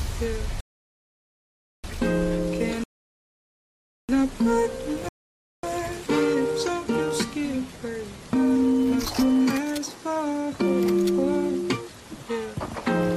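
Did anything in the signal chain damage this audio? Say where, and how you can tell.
Yes, at playback: three rebuffering stalls early on. The sound drops to dead silence from 0.61 to 1.84 s, 2.84 to 4.09 s, and 5.09 to 5.63 s, then picks up exactly where it left off each time, with nothing skipped. That's the player draining its downloaded audio and waiting for more data. Nothing is lost, but the gaps add about 1.23 s, 1.25 s and 0.55 s to the running time.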